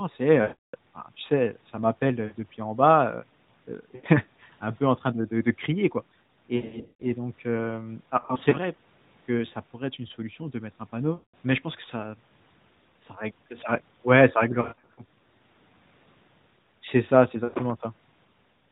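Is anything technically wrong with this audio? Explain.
Yes. There are lost AMR speech frames at 0.42–0.76 s, 2.26–2.35 s (between "tu sais ça m'appelle" and "depuis en bas"), 3.96–4.07 s, 6.56–7.07 s, 8.20–8.56 s (after "donc hem"), 11.14–11.34 s, 14.62–15.01 s (after "ça règle ouais ça") and 17.44–17.55 s. Frames arrived corrupted over the radio link, so the decoder extrapolated from the last good pitch and vocal-tract parameters while lowering the gain.

The two 320 ms losses, at 0.42 s and 6.56 s, are the largest. Sustained runs such as 0.42 s and 11.14 s smear the sound and fade it to silence. The scattered losses at 8.20 s and 14.62 s come as short dips and warbles instead. The narrowband AMR path itself is working, and nothing above 4 kHz passes.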